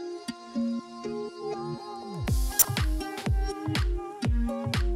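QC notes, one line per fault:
2.59–2.65 s, corrupt frame decoded: a few damaged compressed frames played with misread gains, giving a short burst near -10 dBFS, seen as a vertical spectrogram smear.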